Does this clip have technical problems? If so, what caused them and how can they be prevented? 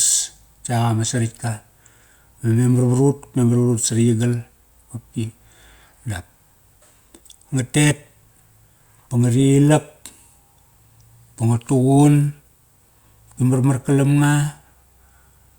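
No, there's nothing technically wrong to hear in this speech clip, so there's no cause to track down and nothing that needs preventing.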